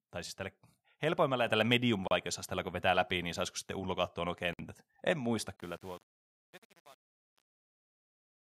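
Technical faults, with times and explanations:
1.47 s, microphone volume stepped up: the speech and the room noise behind it jump together by about 5 dB in a single step. Because everything rises at once, this sounds like a change in input gain, probably from the call software adjusting the microphone. A louder syllable or a compressor would move only the speech, or would pump back down afterwards.
2.08 s, 4.53 s and 7.00 to 7.24 s, Bluetooth stall: the sound drops to complete silence for 35 ms, then 58 ms, then 237 ms, and resumes after each gap. The likely cause is wireless interference delaying packets, so the headphones' buffer ran empty and playback waited for the resent data.
5.56 to 8.52 s, truncation distortion on a fade: the fade-out toward the end starts from about five and a half seconds. From 5.61 s onward, as the level falls, the speech turns grainy and gritty. This fits a volume stage working at about 8 bits without dither, which reduces the quiet waveform to a few coarse square steps. 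A simple gate or noise reduction would cut off more cleanly.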